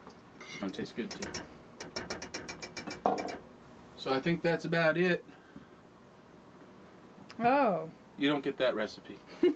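At 0.61 s a skip ahead drops roughly 0.4 s of sound and joins the two sides directly, an abrupt forward jump with no gap or fill, unlike a dropout's silence. From 0.71 to 2.30 s a jitter buffer speed-up trims short pitch-period pieces repeatedly, so about 0.2 s vanishes and the audio runs about 14% fast at unchanged pitch, hurried rather than chipmunk-like. Throughout, the call codec's coding noise and high-frequency cut-off near 8 kHz remain audible.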